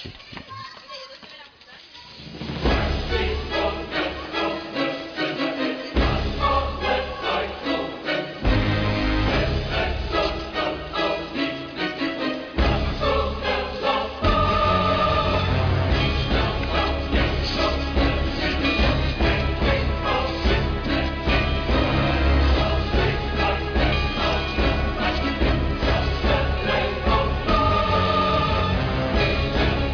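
No technical faults can be heard anywhere in this audio. There is nothing in it that calls for a time mark or an explanation.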